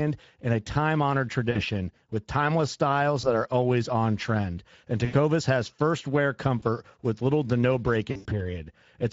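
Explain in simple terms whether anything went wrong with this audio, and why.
The whole clip carries Speex codec damage: a plainly audible, steady roughness from squeezing speech into very little data. Because it is constant rather than in bursts, it comes from the compression, not from the network.

VoIP packet loss concealed by the speech codec also occurs at 1.51 s, at 3.21 s after "with timeless styles", at 5.05 s, at 6.59 s, and at 8.11 to 8.43 s. The decoder fills each gap with a stretched, fading guess instead of leaving silence or a click.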